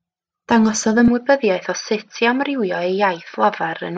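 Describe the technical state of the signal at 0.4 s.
Nothing is wrong with the signal at 0.4 s; the speech runs through that point intact.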